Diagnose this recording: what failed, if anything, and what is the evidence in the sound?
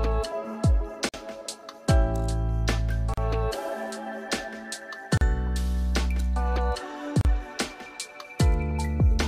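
The failure is at the codec stage: the audio was encoded in separate pieces and joined without trimming each run's start-up delay and last-frame padding, leaving a gap at every join of encoded pieces. The sound drops out abruptly, with edges smeared by the codec, and resumes where it stopped. The gaps come every 2.0 s, at 1.09 s (48.5 ms) and at 3.14, 5.17 and 7.21 s (37.6 ms each).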